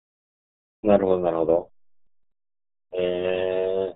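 From the first moment to the last, this speech carries the RealAudio 14.4 codec, and it's pretty rough. Nothing gets through above about 3.8 kHz, so the top end is simply gone and everything sounds muffled, like it's coming down an old phone line. On top of that, the heavy coding damage gives the voice a gargly, bubbling texture, which fits the roughly 8 kbit/s squeeze this old dial-up-era codec works at.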